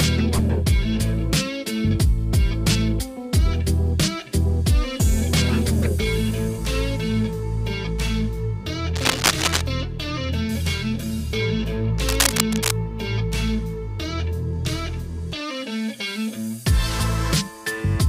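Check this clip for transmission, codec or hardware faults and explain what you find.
Cable scratch noise appears twice: from 8.95 to 9.62 s and again from 12.04 to 12.71 s. Each burst lasts about two-thirds of a second and is roughly as loud as the sound itself, so it sits on top of it as dense, irregular scratching and rustling. The likely cause is a worn cable, connector or control being moved, its contact resistance jumping rapidly and injecting uneven noise into the signal path.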